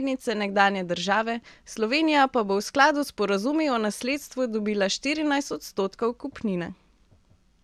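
Speech recording; no technical faults can be heard.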